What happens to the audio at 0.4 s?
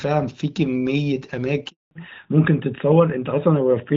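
At 0.4 s the speech comes through intact, carried by the AMR wideband (HD Voice) codec at 12.65 kbit/s with only the light coding colour that rate gives.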